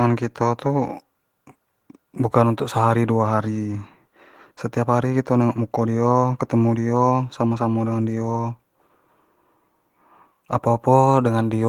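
No technical faults can be heard anywhere in the recording.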